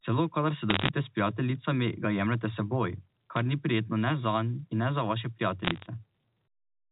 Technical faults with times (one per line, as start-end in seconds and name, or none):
0.70-0.89 bit errors on a digital phone line
3.36-3.39 bit errors on a digital phone line
5.65-5.86 bit errors on a digital phone line